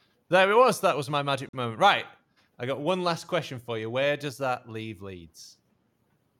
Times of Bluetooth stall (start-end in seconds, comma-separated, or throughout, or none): 1.49-1.53